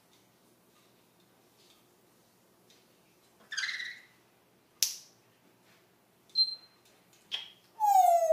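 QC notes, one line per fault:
No faults found in this clip. Nothing calls for a note.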